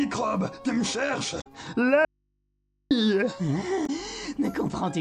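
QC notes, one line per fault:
1.37 to 1.47 s and 3.83 to 3.90 s, damaged data in a compressed stream. Each spot is a short chirp or blip that breaks the flow of the sound. Part of the compressed data there was wrong. The decoder misread those frames and lost its place. It then hunted for the next valid frame header. That causes the garbled burst.
2.05 to 2.91 s, audio dropout to a faint residue. The sound cuts off abruptly for about 0.86 s. Only mains hum remains, about 50 dB below the normal level. The sound then returns just as suddenly. This is not a pause or a fade. The wanted signal was likely lost ahead of a path that stayed live, so the open input kept passing its hum through the gap.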